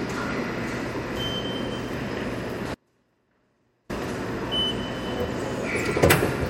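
An audio dropout to a faint residue runs from 2.75 to 3.89 s in this clip of sounds. For about 1.15 s the signal cuts abruptly to a faint leak roughly 40 dB down, then returns just as suddenly, likely a brief loss of the source while the downstream path stayed live.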